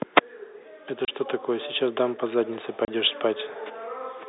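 At 1.05 to 1.08 s and again at 2.85 to 2.88 s, the speech drops into a 30 ms hole of dead silence. This is packet loss filled with silence, which fits one lost 30 ms packet each time. The holes have hard edges, over narrow G.711 telephone-band audio.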